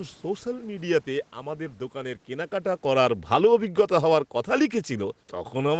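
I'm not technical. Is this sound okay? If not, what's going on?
No. From about 2.86 s until the end, the speech gets steadily quieter. This is automatic gain falling. The call's volume control decided the input was too loud, or its background noise too strong, so it began turning the level down bit by bit. You can tell it's the system and not the talker, because the room noise behind the speech sinks along with it. By the last moments, everything sits lower than at the start.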